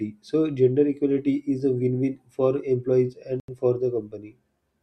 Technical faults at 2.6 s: none

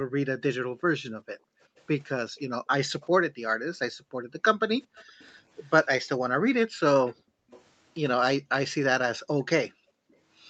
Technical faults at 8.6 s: none

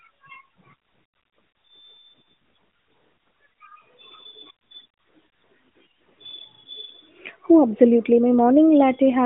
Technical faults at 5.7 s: none

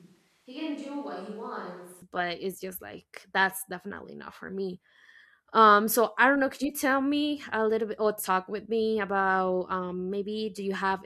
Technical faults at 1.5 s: switch to a distant microphone

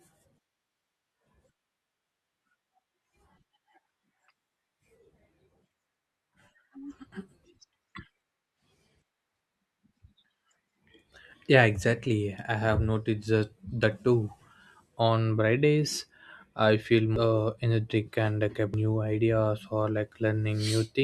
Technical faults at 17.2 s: compressed frames skipped

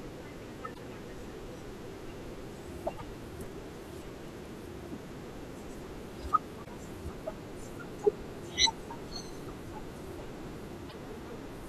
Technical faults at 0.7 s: damaged data in a compressed stream

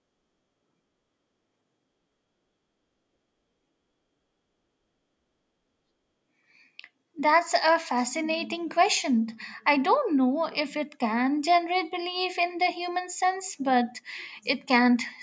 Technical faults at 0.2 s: none

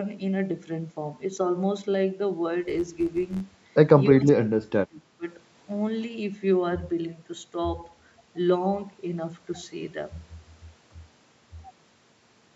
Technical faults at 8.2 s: none

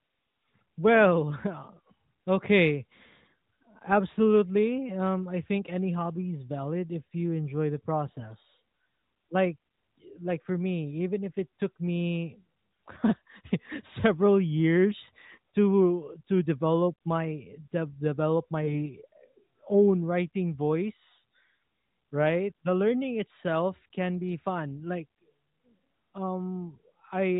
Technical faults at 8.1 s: AMR bit errors

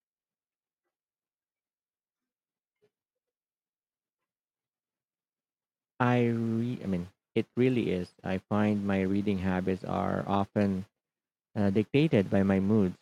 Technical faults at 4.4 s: none

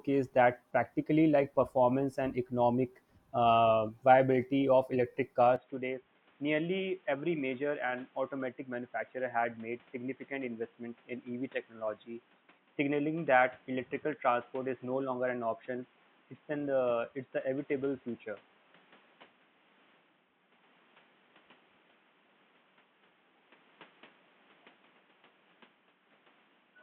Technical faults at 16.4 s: input switched to a poorer device

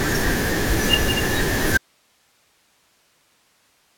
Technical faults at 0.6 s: none

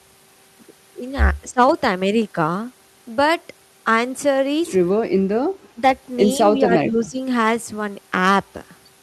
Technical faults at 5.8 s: speech suppressed in double talk

